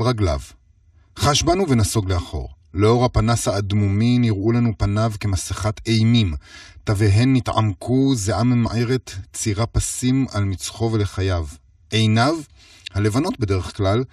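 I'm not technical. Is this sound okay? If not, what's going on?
No. Throughout the speech, there's a channel delay causing comb filtering. One side of the recording arrives a few thousandths of a second late. When both sides are mixed together, some tones cancel out, starting low at roughly 150 Hz. That's why the voice sounds hollow and phasey.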